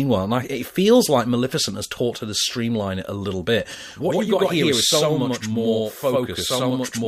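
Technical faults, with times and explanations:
3.75–7.07 s, channel delay (doubling): one channel runs about 93 ms late, which fits a 4096-sample buffer, and the mono sum plays both copies at equal level, giving a doubled, slap-echo sound. The waveform and spectrogram show each onset repeated 93 ms later, equally strong.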